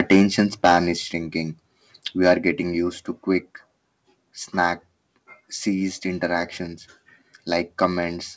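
Speech passed through a wideband call path with nothing above 8 kHz, which fits a codec such as G.722. From 0.0 to 0.78 s the microphone input was likely set too high, causing microphone overload: peaks drive about 10 dB past the converter's limit, and a small share of flattened samples gives the loudest syllables a harsh, crackling edge. At 1.02 s the microphone volume stepped down, likely the call software cutting input gain after that clipping, so voice and background drop abruptly by about 4 dB.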